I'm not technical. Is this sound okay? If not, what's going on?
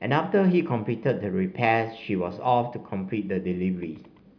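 Yes, nothing in this recording stood out as a problem when I listened to it.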